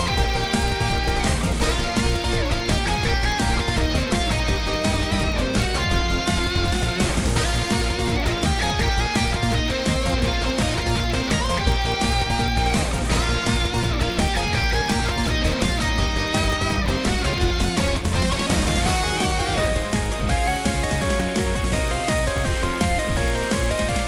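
Throughout, a resampler restarted on every block adds a 50 Hz buzz. Each 20 ms block went from 24 kHz to 48 kHz in isolation, so every edge carries a small error: vertical spectrogram lines every 20 ms and waveform steps, only where signal exists.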